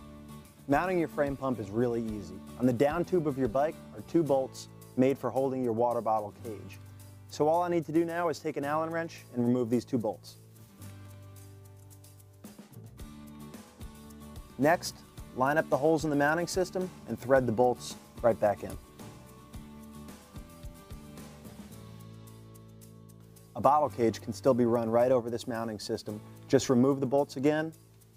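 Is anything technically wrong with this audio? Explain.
No, nothing technically wrong can be heard in this audio.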